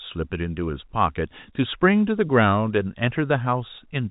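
Speech carried over G.711 A-law telephone coding at 64 kbps, band-limited below 4 kHz as that format requires, with no faults to report.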